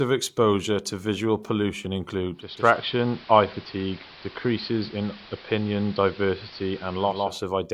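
At 2.31 s, just after "exposure to visual pollution", the receiver loses its digital signal and shows the fault of digital radio blending to analogue, cross-fading over about 455 ms to the station's AM broadcast, then returning near 7.40 s. While on AM, a steady hiss sits roughly 20 dB beneath the speech, and the level shifts by about 1 dB.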